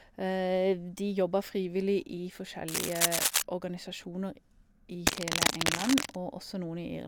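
Cable scratch noise hits from 2.68 to 3.42 s, after "jobba frivillig i", and again from 5.07 to 6.16 s, after "organisasjoner i": harsh rustling, likely a worn connector being moved, at about speech level and then louder.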